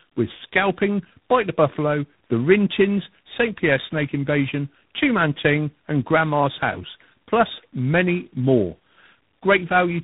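Tandem speech coding runs through the whole of this speech recording: the call was decoded and re-encoded at each network border, with about three separate speech coders in sequence, and the final stage likely being G.726. Each coder compressed the previous one's flawed output, so errors compounded. The result sounds rough and warbly, and the muffled quality comes partly from a hard band limit, with nothing above 3.8 kHz.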